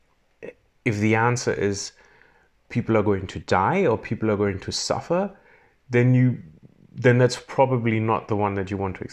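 No technical faults are audible.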